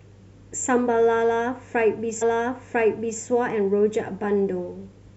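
At 2.21 s the speech jumps back and about one second of it plays again. The stream segment was repeated: the player queued the same segment twice, so the section up to 3.21 s is heard a second time. A small blip marks the jump. On a waveform and spectrogram the patch from 2.21 to 3.21 s is a copy of the one before it, with a short discontinuity at the splice, and the clip runs about 1 s long.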